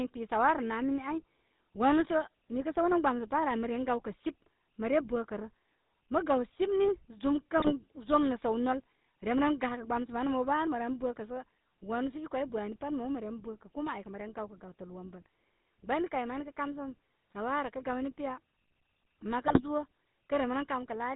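Throughout, the GSM full-rate codec gives the speech a buzzy, gravelly roughness, which fits 13 kbps; the spectrogram shows nothing above 4 kHz and a pulse-driven, striated texture. GSM bit errors strike at 7.58 to 7.72 s, at 17.31 s, and at 19.46 to 19.61 s: corrupted decoder parameters produce squawks, pops and gargling, seen as level spikes and smeared spectral bursts.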